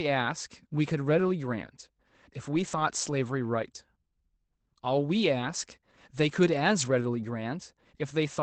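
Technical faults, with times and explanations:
1.05 s, 2.55–2.81 s and 7.01–7.03 s, lost packet rebuilt from error correction: brief rough, noisy patches with no gap. The next packet's low-bitrate Opus copy stood in; the middle patch fits roughly seven packets lost.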